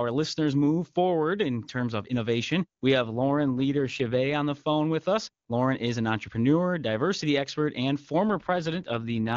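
From 3.02 to 4.34 s and again from 8.29 to 9.35 s the speech turns rough and synthetic, with no gap or loss of band. This is an AMR rate drop: the HD Voice path falls back to a lower rate, which fits 8.85 kbit/s rather than 23.85 kbit/s.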